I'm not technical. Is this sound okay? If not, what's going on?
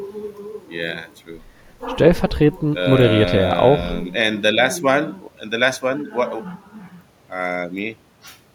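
Yes, it sounds fine; nothing here needs fixing.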